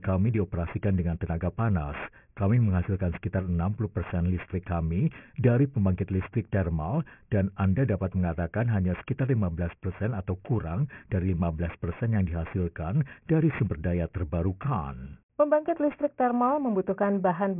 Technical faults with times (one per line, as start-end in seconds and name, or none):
0.00-17.60 aliasing